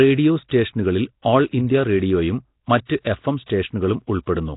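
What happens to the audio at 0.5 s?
From 0.49 to 0.51 s there is pre-echo: quantisation noise spread over the coding block leaks about 26 ms ahead of an attack, heard as a brief hiss and seen as a smear before the waveform's onset. Throughout, the audio is rough, hissy and underwater-sounding, likely from Nellymoser compression, with the spectrogram empty above 3.8 kHz.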